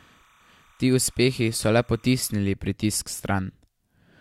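A speech recording carries timecode bleed from the start to 2.34 s: a faint, steady chirping warble sits well below the speech, at roughly 35 dB down. Linear timecode at 30 frames per second from a nearby track or cable has leaked into the audio path. On a spectrogram it shows as thin horizontal bands near 1 kHz and 2 kHz that flicker between the two pitches, ending cleanly at 2.34 s; the waveform barely shows it at that level.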